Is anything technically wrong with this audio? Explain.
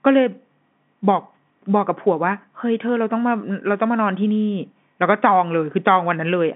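No, this is ordinary telephone-line speech in G.711 coding, with the sound confined to roughly 150 Hz to 3.5 kHz and nothing above about 3.8 kHz, exactly as that format delivers it.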